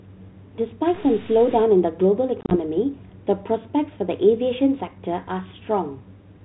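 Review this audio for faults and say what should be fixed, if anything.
Stuck bit, 0.94 to 1.64 s: the speech turns distorted, with noise filling the gaps between sounds. This is likely one converter or data line holding a single bit fixed, so about half the samples are pushed off by that bit's weight. Check the converter wiring and data lines for a broken or shorted connection.

Packet loss on an ADPCM call, 2.41 to 2.56 s: about 70 ms of audio drops out in hard-edged holes spread over 100 ms, the longest 30 ms, which fits around seven lost packets. The G.726 decoder at 32 kbit/s then briefly resumes with some distortion before settling. Add jitter buffering or concealment, and reset the decoder state after each gap.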